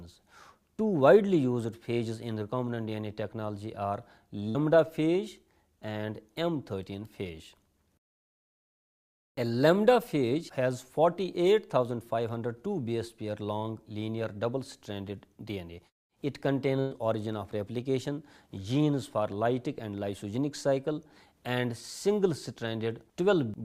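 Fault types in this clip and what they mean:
Burst of packet loss: Audio drops out twice, at 4.49 to 4.57 s and 16.81 to 16.93 s. Each time, the last sound is stretched and fades, for 52 ms and then 104 ms. Playback then jumps ahead, skipping 60 ms and 100 ms.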